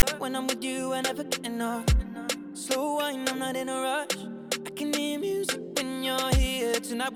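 A harsh, lopsided rasp with hard edges, followed by a moment of silence, opens the audio from 0.00 to 0.03 s: file tags played as audio, where text tag data and zero padding were decoded as samples.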